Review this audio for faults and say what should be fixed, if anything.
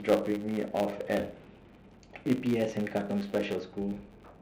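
A filter restarted on every block runs through the whole clip. Each block's filter starts from silence instead of carrying its state forward, so every block boundary produces a small transient. These repeat at 100 Hz, which fits 10 ms blocks, and are heard as a buzz that rises and falls with the speech level. On a spectrogram this shows as a comb of harmonics spaced 100 Hz apart, and on a waveform as evenly spaced ticks. The fix is to save the filter's state at the end of each block and restore it at the start of the next.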